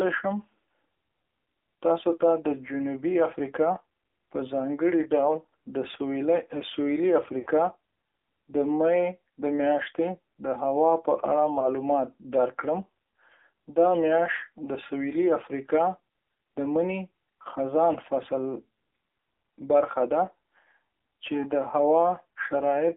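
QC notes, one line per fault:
Throughout: AMR narrowband mobile codec. The speech is confined to roughly 300 Hz to 3.5 kHz, with nothing above 4 kHz, and the codec damage is plainly audible. At 7.4 kbps the vocal tract model is fed only a few pulses per 5 ms subframe, so voiced sounds come out buzzy and synthetic, and consonants lose their crispness. The narrow, telephone-like band and the coarse excitation together give the thin, processed character heard across the whole clip.
7.40 to 7.48 s: lost AMR speech frames. A run of three lost frames, about 60 ms of missing speech. The decoder repeats the last good pitch and vocal tract settings while lowering the gain, so the sound is briefly smeared and fades. When good frames resume, the speech returns weak or rough for a moment.
11.60 to 11.73 s: lost AMR speech frames. A single lost frame, 20 ms of missing speech. Concealment covers it with a short dip or warble before the decoder recovers.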